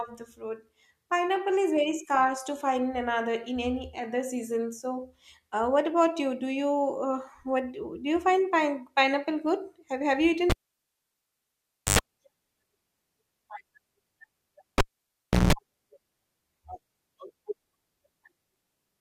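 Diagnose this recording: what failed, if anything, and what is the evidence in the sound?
The analogue wiring failed: a cable was pulled and plugged in twice, at 10.50 to 11.99 s and 14.78 to 15.53 s. Each starts with a pop, goes near-silent for 1.44 s and 0.69 s, then buzzes at 50 Hz and 60 Hz as the tip alone touches. The buzz separates this from a digital dropout.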